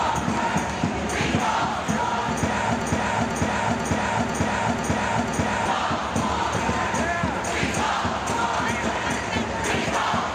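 From 2.81 s to 5.66 s, a half-second fragment of about 0.49 s repeats exactly, back to back, six times: a broken-record loop. The likely cause is a stalled player, encoder or stream resending its last buffered piece, so the audio meant for that stretch is lost.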